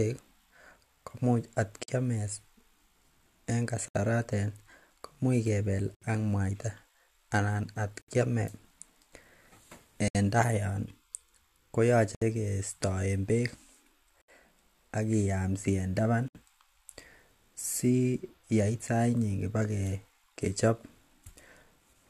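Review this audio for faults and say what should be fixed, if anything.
The speech breaks with a gap at a join of encoded pieces at 1.83, 3.88, 5.95, 8.02, 10.08, 12.15, 14.22 and 16.28 s. The joins fall about every 2 s. The first silence lasts 49 ms and the rest 67 ms. Each piece was encoded on its own. The encoder's start-up delay and last-frame padding were never trimmed. Speech then resumes where it stopped. Fix this by encoding the audio as one continuous stream, or by trimming each piece's delay and padding before joining.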